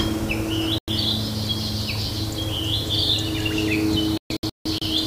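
Throughout, grainy distortion tracks the sound, likely low bit depth without dither, consistent with 5-bit rounding; error sits roughly 15 dB down, as a coarse stepped waveform.

Digital broadcast dropout mutes 0.78–0.88 s, then scatters holes across 4.18–4.82 s, longest 160 ms, leaving flat-line gaps and blank spectrogram columns.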